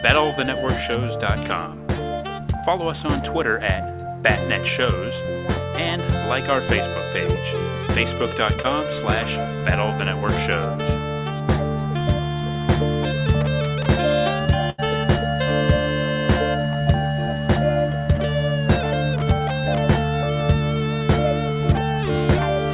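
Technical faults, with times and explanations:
8.62–8.66 s, short concealed packet loss: A brief smear, a slight wobble that passes in a few hundredths of a second before the sound settles again. About 20 ms of audio did not reach the decoder in time, so the receiver covered the gap by extending the preceding sound for roughly 18 ms and then blending back into the real signal. Within this call's narrow band, with nothing above 4 kHz as fits a G.711 mu-law path, the patch is a small blur.
14.70–14.80 s, burst of packet loss: The sound hangs on unnaturally for about a tenth of a second, growing dimmer, then jumps ahead as if a sliver were skipped. Around 80 ms of consecutive audio was lost or arrived too late to play. The receiver filled roughly 83 ms by continuing the last sound and turning it down as the gap lengthened. Playback then resumed further on, and the 80 ms between was never heard.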